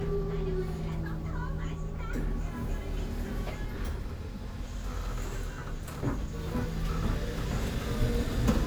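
At 5.86 to 5.97 s, a brief irregular burst of scratchy crackle cuts through the audio: loose connector crackle, where a worn contact briefly breaks and remakes the signal path.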